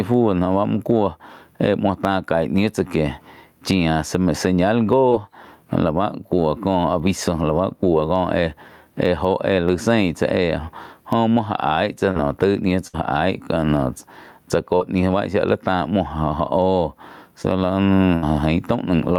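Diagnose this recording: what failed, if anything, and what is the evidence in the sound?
Throughout the recording, the gain pumps up and down, a swing of around 15 dB. This squashes the dynamics. The likely cause is call processing: excessive input gain driving a fast limiter. Unlike network faults, it is continuous rather than confined to brief instants.

Short concealed packet loss, a network fault, occurs at 5.09–5.13 s, 12.11–12.17 s, 14.76–14.82 s and 17.42–17.46 s. The decoder bridged holes of about 20 to 40 ms by extending the preceding sound, heard as brief smears or wobbles. These blend back without fading, which distinguishes them from bursts.

A burst of packet loss occurs at 12.87–13.02 s and 18.16–18.24 s. Roughly 60 ms went missing each time, so the decoder held the last sound and let it decay into buzz or hiss. At 12.87 s, about 14 ms is skipped outright, so the audio resumes further ahead.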